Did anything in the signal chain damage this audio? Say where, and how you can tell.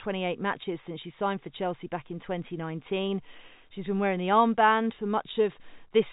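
No, nothing in this chain damaged the audio.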